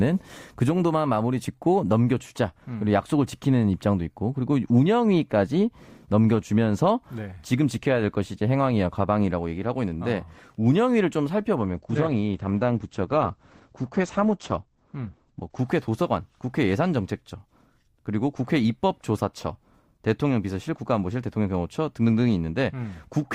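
Adaptive stream at a lower bitrate, from 11.59 s to 15.59 s: for four seconds the stream switches to a much leaner version, as players do when the connection slows, and the speech turns thinner and more processed. Nothing is left above about 8.9 kHz, so the airy treble disappears, and codec artefacts thicken. The drop and the recovery are both abrupt, with no gap, which fits a step from roughly 64 kbit/s Opus down to about 12 kbit/s.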